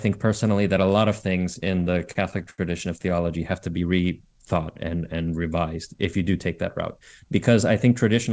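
From 1.54 to 2.60 s, just after "that a lot of", packets arrived late and the jitter buffer kept running dry, causing repeated stalls (stutter). About a dozen short holds, the longest 77 ms, stretch the last sound, so the speech drags and stutters without losing anything, above a call band that stops at 8 kHz.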